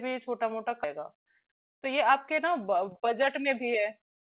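At 0.84 to 0.86 s the speech jumps forward in a skip ahead. Roughly 0.7 s of audio was dropped while later audio was already queued, and the two sides are spliced with no silence. That missing gap is what sets it apart from a dropout.

From 0.98 s to 4.22 s a jitter buffer speed-up follows. To shed the built-up delay, the receiver cuts short pitch-period pieces again and again, removing around a fifth of a second. The speech runs at 107% yet keeps its pitch, which separates this from a simple faster playback rate. The band stays below 4 kHz, consistent with a G.711 mu-law call path.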